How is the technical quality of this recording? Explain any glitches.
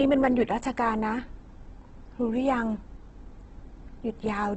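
The quality is compromised by heavy codec damage throughout. Opus compression, likely at a low rate near 12 kbps, causes it: the encoder fills starved bands with folded or noise content, so speech turns grainy and rough instead of swirling as MP3 would, and nothing survives above 8.2 kHz.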